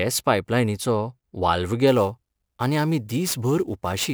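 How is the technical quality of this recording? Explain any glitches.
The quality drops partway through. From 1.87 s to the end, a gritty hiss rides on the speech, strongest on loud and bright sounds. This is sample clock jitter: a wobbling converter clock, around 10 microseconds, mistimes samples, leaving error roughly 20 dB below the signal.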